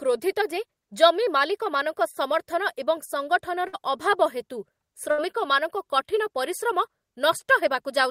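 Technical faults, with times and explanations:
3.67–3.75 s and 5.11–5.20 s, burst of packet loss: consecutive packets failed to arrive in time, so the receiver extended the last sound while fading it, giving a held buzz or hiss of about 55 and 70 ms, then resumed with roughly 60 and 80 ms of speech skipped.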